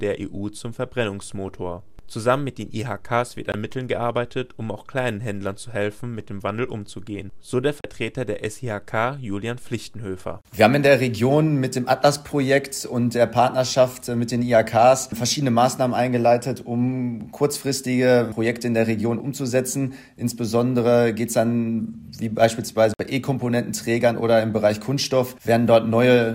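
At 3.52 s, 7.81 s and 22.94 s the sound cuts to silence for 19, 37 and 56 ms, then resumes further along, likely a Bluetooth dropout from late packets.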